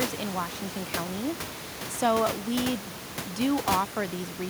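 No technical faults can be heard anywhere in this speech clip. Room noise sits in the background about 11 dB below the speech, as part of the recording itself.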